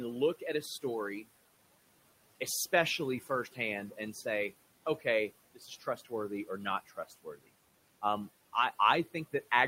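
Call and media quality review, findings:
Noise suppressor artifacts, throughout the clip. Background drops by about 17 dB between phrases and swells back under speech. The suppressor's per-band gain is tracking room noise, itself about 19 dB below speech.

Speech cut by the noise suppressor, 5.54–6.12 s and 6.86–7.5 s. Quiet speech is pulled down by up to about 15 dB and then about 17 dB, together roughly half a second. The suppressor misreads soft speech as noise, so those portions sound swallowed.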